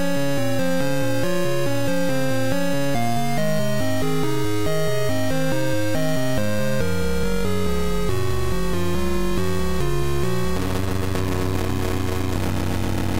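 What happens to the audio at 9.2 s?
Nothing goes wrong at 9.2 s; the sound continues intact through that moment, with no dropout, click, glitch or other fault.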